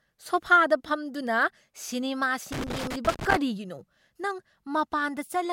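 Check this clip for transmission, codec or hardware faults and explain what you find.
One hardware fault is present: loose connector crackle, from 2.52 s to 3.36 s. For just under a second, the speech is broken up by an irregular burst of crackle and scratching. A worn or dirty contact in the signal path is making and breaking as it shifts. Each break chops the signal off for an instant. The uneven rhythm of those cuts gives the rough, gritty texture, unlike a steady hum or clean dropout.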